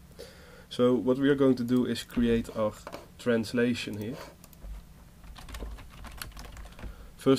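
Nothing stood out on listening.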